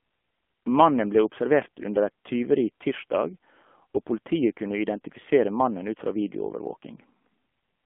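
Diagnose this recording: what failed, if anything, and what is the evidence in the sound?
The codec stage failed: the speech runs through the AMR narrowband mobile codec for its full length, sounding buzzy and synthetic, which fits a low mode near 7.4 kbps. A spectrogram shows energy confined to roughly 200 Hz to 3.4 kHz, with nothing above or below.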